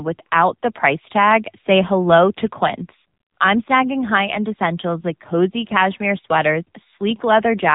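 From start to finish the speech carries the sound of the AMR narrowband mobile codec, AMR-NB. The top end is gone above about 3.8 kHz, leaving the dull, boxy band of a phone call. The damage is plainly audible: the voice comes across buzzy and synthetic, because the codec rebuilds it from a vocal-tract model excited by sparse pulses, and at this low rate, which fits roughly 7.95 kbit/s, little fine detail survives.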